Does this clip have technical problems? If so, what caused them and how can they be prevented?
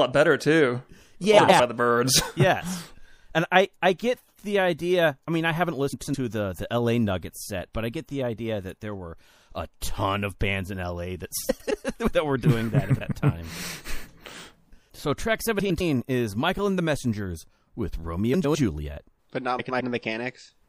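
Yes. The whole clip has plainly audible MP3 compression artefacts, likely from encoding at a low bitrate around 64 kbps. Encoding at a higher bitrate avoids this.

Frames out of order show up as short garbled flutters at 1.38, 5.93, 11.49, 12.90, 15.59, 18.34 and 19.59 s. Each lasts about 0.22 s, with two roughly 0.1 s halves swapped, which fits four frames per half. Proper packet sequencing and reordering buffers before decoding would prevent it.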